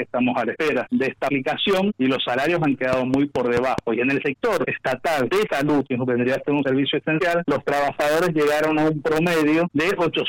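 From 2.93 to 3.79 s there is a train of clicks, most likely caused by interference from nearby equipment or a faulty connection or power supply injecting a repeated pulse into the signal path. The pulses arrive at a steady 4.7 per second, about five in all, each with much the same shape and peaking roughly 15 dB above the surrounding sound. The result is a brief, evenly paced ticking that sits clearly on top of the audio.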